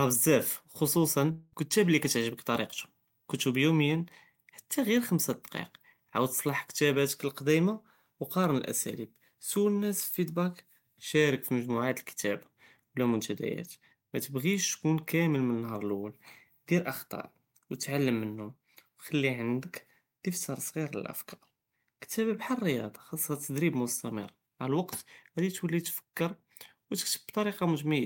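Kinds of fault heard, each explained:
Long network dropout: from 1.31 to 1.54 s, between "בזאף חוסוסן" and "אלכתאב אללי קتعجبכ", the sound turns into a fading buzz with no silence, likely from audio lost in transit.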